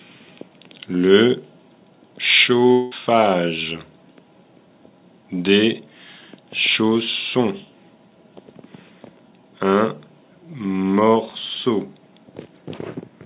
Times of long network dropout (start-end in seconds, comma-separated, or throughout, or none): 2.72-2.93